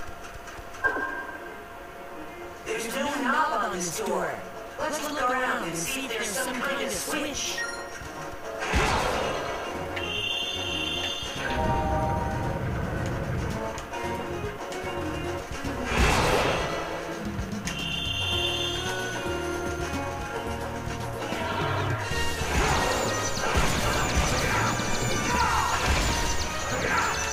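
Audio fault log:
No faults heard.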